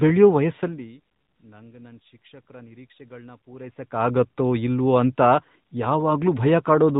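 From start to finish the speech carries the sound of the AMR narrowband mobile codec, at a mid-range rate that fits roughly 10 kbps. The audio is reduced to 8 kHz sampling and rebuilt from a vocal-tract model excited by sparse pulses, so nothing survives above 4 kHz, sibilants lose their edge, and the voice takes on a plainly audible buzzy, synthetic quality. On a spectrogram, energy stops at a flat 4 kHz ceiling.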